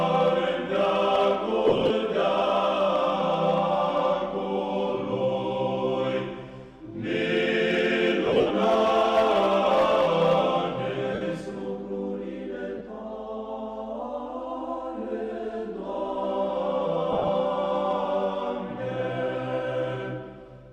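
Lost LE Audio frames break up the sound at 1.68 to 1.91 s, 8.26 to 8.51 s, 11.14 to 11.21 s, 12.78 to 12.81 s and 17.12 to 17.29 s. The losses fit 7.5 ms frames. The decoder fills each gap by replaying the last spectrum with scrambled phase, so tones smear into noise. The worst burst is at 8.26 s, with about 190 ms missing and one run near 70 ms.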